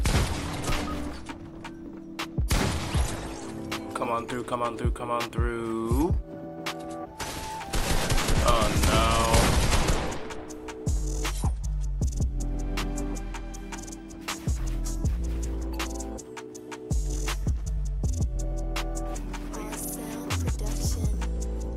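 The audio suffers from clock drift between sender and receiver. The sender's clock runs roughly 4 percent fast, so audio arrives faster than it is played. The jitter buffer keeps filling, and the receiver must discard material to keep up. That produces repeated timing corrections from 1.24 s to 21.73 s. The receiver trims short pieces again and again, always cutting, at uneven spacing. The net effect is playback at about 103 percent speed.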